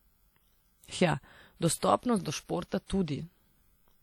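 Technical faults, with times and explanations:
Throughout, WMA compression: the speech rings and sounds washy, with a hiss that breathes with the signal and smears across tens of milliseconds, which fits a 48 kbps WMA encode as the likely cause. Unlike band-limited codec damage, content still extends to 20.1 kHz.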